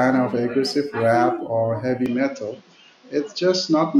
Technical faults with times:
2.06-4.00 input switched to a poorer device

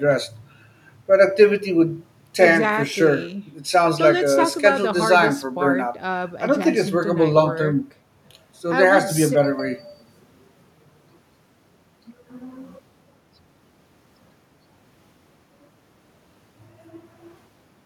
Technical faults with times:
none

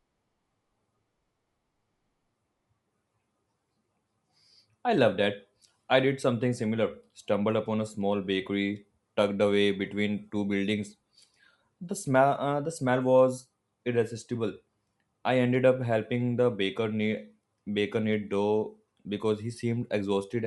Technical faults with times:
0.00-20.46 Bluetooth LC3 compression
19.04 lost LE Audio frames

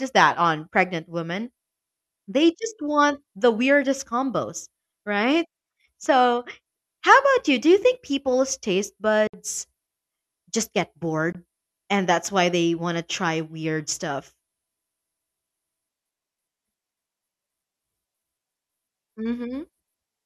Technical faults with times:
9.27-9.34 Bluetooth dropout
11.32-11.35 Bluetooth dropout

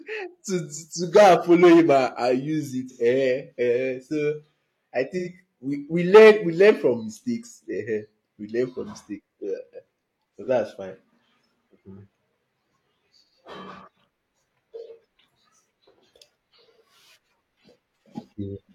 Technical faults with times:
2.89-3.02 AAC frame loss with concealment
5.17-5.29 AAC frame loss with concealment
10.42-10.48 AAC frame loss with concealment

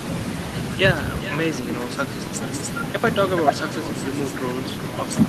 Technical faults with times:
0.00-5.29 echo with no canceller

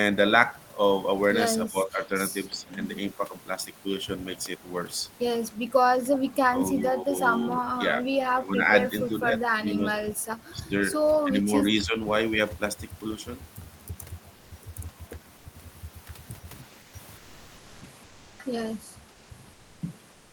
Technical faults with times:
1.68-2.14 speech suppressed in double talk
2.49-2.77 speech suppressed in double talk
5.70-7.14 speech suppressed in double talk
7.50-9.99 speech suppressed in double talk
10.53-10.72 speech suppressed in double talk
11.24-11.97 speech suppressed in double talk
14.35-14.51 comfort noise in place of the background
15.37-15.45 comfort noise in place of the background
16.81-18.39 comfort noise in place of the background
19.11-19.81 comfort noise in place of the background
20.11-20.32 comfort noise in place of the background

